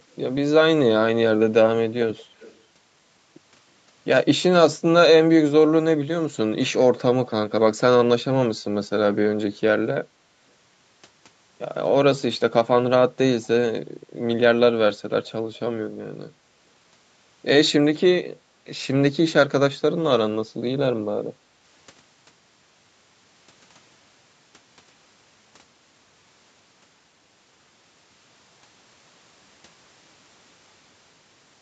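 From 2.16 to 2.6 s there is an echo leak, likely from a loudspeaker at the far end whose echo canceller let part of its microphone pickup back into the call. A faint copy of the speech, roughly 30 dB down, trails the original by 257 ms.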